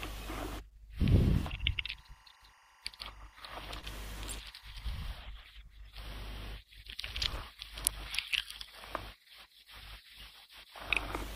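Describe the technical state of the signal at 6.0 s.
At 6.0 s the speech signal is intact, with no audible dropout, distortion, clipping or other technical fault.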